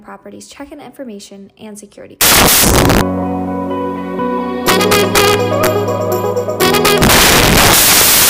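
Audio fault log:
2.21–8.29 s, samples built from the wrong bytes: the audio turns abruptly into loud, harsh broadband noise from 2.21 s to the end. The sample bytes are being assembled in the wrong order or offset, so the rapidly changing low bits dominate each value. On a spectrogram this shows as dense broadband energy. On the waveform it is a dense, loud noise block.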